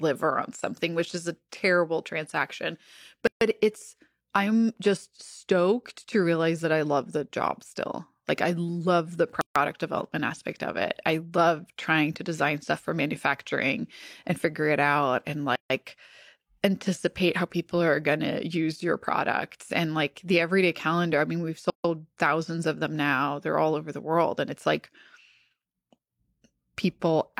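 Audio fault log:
3.27 s, 9.41 s, 15.56 s and 21.70 s: gap at a join of encoded pieces. The speech drops out for about 140 ms every 6 s, with smeared edges, then resumes where it left off. Those silences come from encoder start delay and end padding left in at each join.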